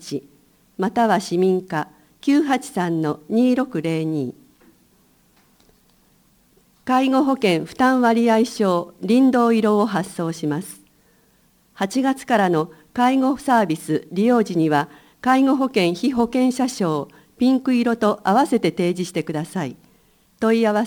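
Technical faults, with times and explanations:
Throughout, crude rate conversion: samples are dropped or repeated instead of filtered, which fits a change from 48 kHz to 44.1 kHz by nearest-sample picking. The recurring timing error creates inharmonic tones, a gritty fizz roughly 30 dB below the sound, following loud and high passages.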